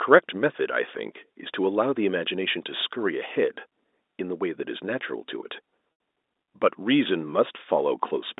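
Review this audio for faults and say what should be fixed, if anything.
Packet loss with pitch repetition, 5.92 to 6.00 s: about 80 ms of audio went missing, which fits roughly eight 10 ms packets. The receiver filled the gap by looping the last pitch period, so the sound briefly holds with a buzzy quality and fades before the speech cross-fades back in. The G.711 mu-law telephone coding around it keeps the usual narrow 250 Hz to 3.7 kHz line band. To prevent it, add a jitter buffer or forward error correction to the call path so short bursts of lost packets can be recovered instead of concealed.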